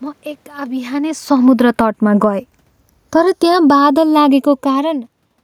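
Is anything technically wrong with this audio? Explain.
Yes. Throughout the speech there is a slow, hollow flanging that sweeps gradually through the spectrum. This is the channels drifting apart. The two channels run on separate clocks, off by roughly 70 parts per million, so the delay between them slides to under half a millisecond and moves the comb notches when the channels mix.

From 0.82 to 1.95 s the level sinks by about 8 dB, and from 3.0 to 3.93 s it sinks by about 9 dB. The room noise dips along with the speech each time. This is automatic gain falling: the gain control judged the input too loud and gradually pulled its gain down. The talker also moves near 1.0 s, but the room noise dipping too points to the gain control.

From 1.86 to 2.64 s the speech and the room noise swell together by about 4 dB. This is automatic gain rising. The gain control judged the input too quiet and gradually raised its gain, which lifts the background as much as the speech. 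It overlaps the end of the first fall.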